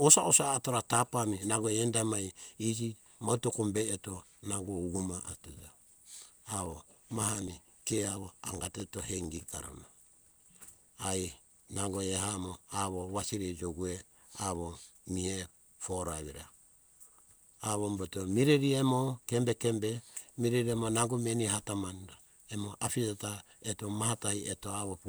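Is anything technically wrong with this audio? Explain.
Yes. Periodic USB or driver dropouts run from 6.66 s to 10.50 s. At a steady 63 ms interval, something blocks the USB link or audio driver, and roughly a millisecond of speech is skipped each time instead of being filled with silence. The signal jumps forward abruptly around seventy times, producing a regular train of ticks, about sixteen per second, laid over the speech for nearly four seconds.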